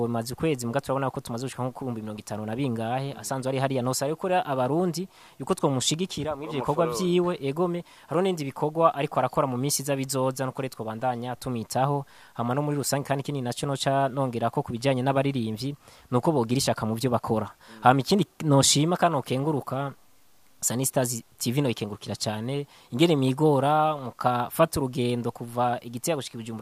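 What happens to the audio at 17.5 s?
Two devices are running on unsynchronised clocks, likely drifting apart by around 70 ppm, so at 17.5 s one sample is dropped or repeated roughly every third of a second. These clock slip clicks run from 0.26 to 26.44 s and are heard as faint, regular ticks.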